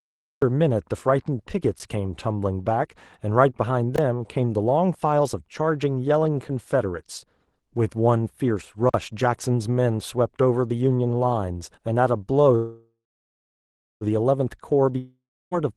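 The recording or stream began late, so this speech clip opens with a cut-off start. There is digital silence until 0.42 s, and then the sound comes in already in progress, with no natural attack and an abrupt edge where it begins. Three times, the output buffer was not filled in time and its samples were left at zero, producing a block of digital silence. At 1.79 s the gap is about 12 ms, short enough to register as a tick. From 3.96 to 3.98 s there is a 23 ms hole. From 8.89 to 8.94 s a 46 ms dropout is heard as a brief gap. All three cut to silence and back with no fade, and the three lengths fit buffers of 512, 1024 and 2048 samples. From 12.55 to 14.04 s there is a call audio freeze, likely caused by packets held up in transit until the jitter buffer ran dry. The receiver stretches the last sound into a fading buzz, which sinks into about 1.05 s of silence. The speech then resumes exactly where it stopped, so about 1.46 s has been inserted and nothing is lost, but everything after arrives that much later. 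From 14.98 to 15.54 s a long network dropout follows, likely because no audio arrived. Again the last sound is continued and fades to roughly 0.32 s of silence, but this time the speech returns further along, with about 0.54 s of it never played.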